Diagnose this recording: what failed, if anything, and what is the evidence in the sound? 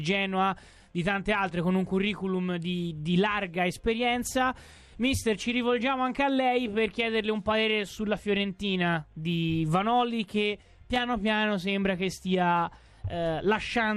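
The codec stage failed: the sound has the dull, gurgling, granular texture of MP2 compression from start to finish, with plainly audible damage, likely from encoding at a low rate that fits around 80 kbps. Layer II divides the spectrum into 32 equal sub-bands, and when bits run short the upper bands drop out while the rest are coarsely quantised. On a spectrogram, the high frequencies appear as blocky bands flickering on and off.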